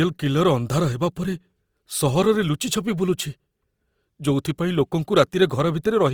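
Right through the speech there's a grainy, rough texture, with the tonal parts turning plainly noisy and sandpapery. That's likely Opus compression in its music mode at a low rate, around 24 kbps. Starved bands get filled with noise, so the audio still reaches about 20 kHz.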